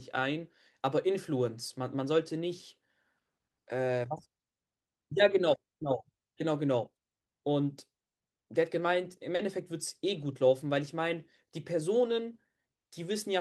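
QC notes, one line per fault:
9.35–9.41 s: short concealed packet loss. About 40 ms of speech arrived too late for the decoder, so the receiver extended the preceding sound to cover the gap and then crossfaded back into the real signal. The result is a brief smeared, wobbly patch.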